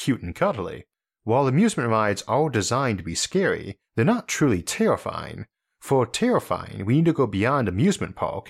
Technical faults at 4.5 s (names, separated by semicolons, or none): none